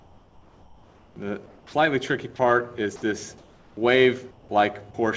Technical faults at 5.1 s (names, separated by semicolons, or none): none